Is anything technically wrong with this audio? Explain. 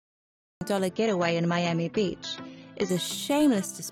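Yes, there are two faults. The first is a cut-off start. The clip holds digital silence until 0.61 s, then the sound enters mid-sound with no attack or fade, because capture began late. Unlike a quiet intro or slow fade-in, the onset is an abrupt jump from nothing to full level.

The second is a stretch of adaptive stream at a lower bitrate, from 0.89 to 2.89 s. The connection slowed and playback switched to a leaner encode, which fits a move from about 96 down to 24 kbit/s AAC. The audio is dull, with nothing above 6.9 kHz, and codec artefacts rise. Unlike a dropout, nothing goes missing. The quality changes abruptly at both ends while the sound continues without a gap.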